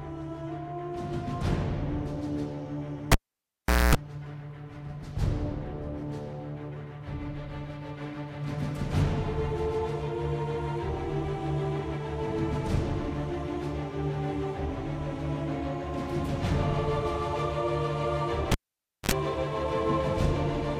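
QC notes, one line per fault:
3.12–3.95 s and 18.52–19.11 s, cable pulled and plugged in: a live lead is yanked and reinserted. Each event opens with a pop as the signal breaks, followed by near silence, about 0.78 s the first time and 0.55 s the second. Mains buzz then bursts through while only the plug tip makes contact, lasting 0.24 s at 60 Hz and 55 ms at 50 Hz. A second pop marks the return of the sound.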